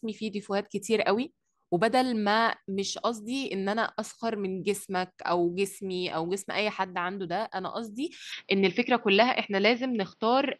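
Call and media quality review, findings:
Input switched to a poorer device, 8.32 s to end: speech turns duller, band-limited near 6 kHz, small level shift, faint new noise floor, no gap; likely mid-call mic change.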